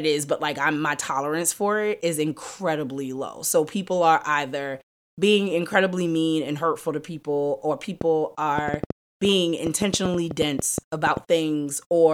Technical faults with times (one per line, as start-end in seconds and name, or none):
8.01-11.18 train of clicks